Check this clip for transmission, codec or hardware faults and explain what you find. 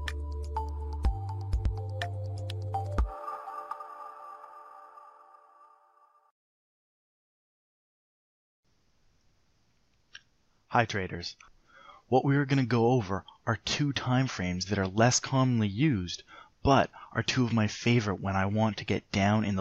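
I hear no transmission, codec or hardware faults in this clip. Nothing in the audio points to a problem anywhere along its path.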